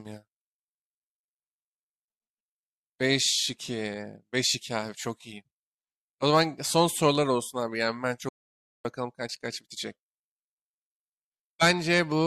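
An audio dropout to silence hits this speech clip from 8.29 to 8.85 s, cutting the sound off mid-flow for about 0.56 s of silence with no room tone, likely because the input link failed briefly while the recorder kept writing silence.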